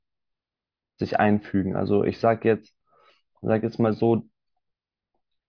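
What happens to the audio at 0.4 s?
Nothing goes wrong at 0.4 s; the speech runs through that moment intact, with no dropout, click or distortion.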